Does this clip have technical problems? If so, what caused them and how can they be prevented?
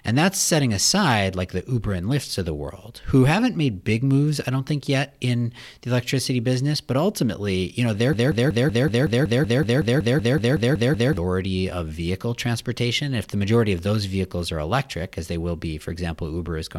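Yes: after "ultimately you know their", a 0.19 s fragment repeats 16 times, 8.13 to 11.17 s, a broken-record loop, likely a stalled player or stream resending its last buffer. Better buffering and stall detection that mutes instead of repeating would prevent it.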